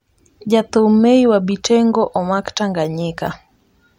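No technical faults can be heard in the speech at any point.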